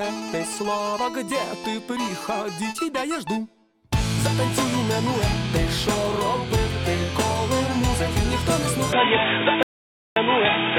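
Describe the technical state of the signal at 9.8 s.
At 9.8 s the signal is in an audio dropout to silence, running from 9.63 s to 10.16 s and lasting about 536 ms. The input was likely lost for that stretch while silence kept being written, so the sound cuts out completely, with no room tone. The waveform shows a dead-flat line, and the spectrogram a fully blank column.

Around that gap, from 8.93 s to the end, the input has switched to a poorer device, likely a different microphone or a headset's call profile. Nothing passes above 3.8 kHz, so the sound turns dull and boxy, with a shift in level and a new noise floor about 30 dB below the signal. The spectrogram shows a hard ceiling at 3.8 kHz from 8.93 s onward.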